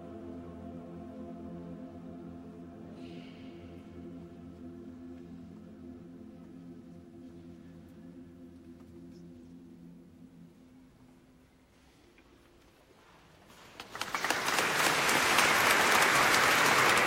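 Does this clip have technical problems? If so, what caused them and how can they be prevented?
No, this recording of sounds shows no technical faults, so there is nothing here that calls for prevention.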